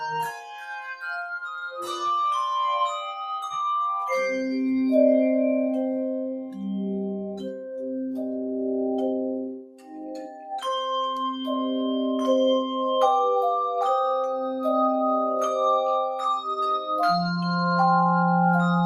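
A noise suppressor built for speech was left running on this sound, so it treats sustained and ambient material as noise and keeps pulling the level around by about 5 dB, giving a pumping, thinned texture. The same noise suppressor cuts sound harder in places, sinking held or decaying parts: by about 10 dB from 0.32 to 1.04 s, about 5 dB at 6.42 to 6.57 s and 7.5 to 7.82 s, about 17 dB from 9.44 to 10.5 s, about 5 dB at 11.33 to 11.48 s and about 4 dB at 14.49 to 14.64 s.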